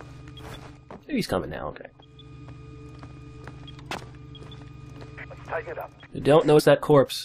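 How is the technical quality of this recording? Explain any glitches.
One glitch stands out near the end: a short stretch of compressed frames skipped at 6.58 to 6.60 s. Whole frames were left out, so the audio jumps ahead by roughly 70 ms, which fits about three frames of around 23 ms each. On a waveform the envelope shifts abruptly, and a spectrogram shows a brief vertical discontinuity.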